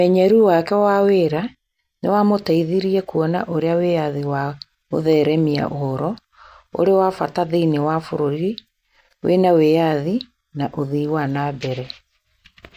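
No technical faults occur at any point in the recording.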